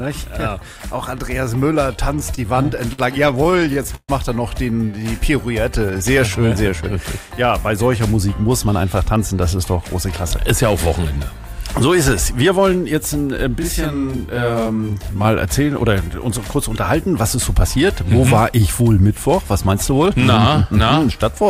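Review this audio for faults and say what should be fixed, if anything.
From 2.19 to 4.11 s the audio drags and stutters through about twenty brief holds, the longest 134 ms, totalling 373 ms. These are repeated stalls (stutter): late packets kept draining the jitter buffer, so the receiver stretched the last sound.

From 4.85 to 5.25 s the audio runs slower at 91% speed, adding 43 ms, and from 5.75 to 6.70 s at 94%, adding 69 ms. Both are jitter buffer slow-down, where repeated pitch periods rebuild a depleted reserve.

From 8.67 to 11.18 s the audio hurries at 107% speed, losing roughly a fifth of a second, and again from 19.66 to 20.07 s at 108%. Both are jitter buffer speed-up, trimming excess buffered delay.

From 13.59 to 15.24 s the sound doubles into a slap at equal level. This is channel delay (doubling): one channel lags 40 ms before the mono sum.

To prevent these, stabilise packet delivery with a steadier network path and a better-tuned jitter buffer target, and align both channels before downmixing.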